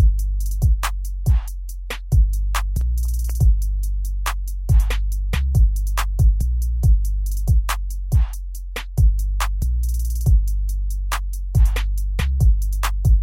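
CD scratch ticks run from 2.57 to 3.54 s, five small clicks at roughly five per second, the longest lasting only about a millisecond. Each tick marks a point where a surface blemish on the disc spoiled more data than error correction could repair, so the player patched over or silenced those few samples. Because the damage passes under the laser once per revolution, the ticks recur at the disc's rotation rate.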